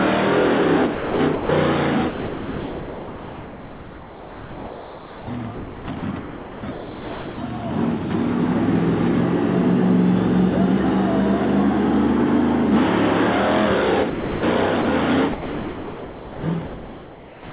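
From 0.95 to 1.49 s, the sender's voice detector likely switched on and off repeatedly, producing sound chopped by the voice detector: about 0.39 s of it is swapped for synthetic comfort noise, so the audio stutters.

From 2.09 to 5.27 s, the detector likely judged the incoming sound to be background and stopped transmitting. This is sound dropped by the voice detector: the receiver fills the whole 3.18 s with comfort noise, about 2.56 s of real sound disappears, and a flat steady hiss remains until the detector reopens.

Between 5.53 and 7.38 s, chopping likely returns as the detector toggles again. About 1.47 s of that stretch becomes comfort noise, leaving broken fragments of sound separated by synthetic fill.

At 14.10 to 14.43 s, the detector likely closed once more. The resulting dropout replaces 0.33 s with steady noise. A much briefer drop follows at 14.82 to 14.85 s, lasting 30 ms, where the detector likely shut for a moment and a tiny slice of sound vanishes into fill.

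From 15.33 s to the end, the detector likely chops the audio again, with about 2 s of the closing stretch replaced by comfort noise in choppy patches. The call path's narrowband character carries throughout, with nothing above 4 kHz, which fits a 64 kbps G.711 A-law stream.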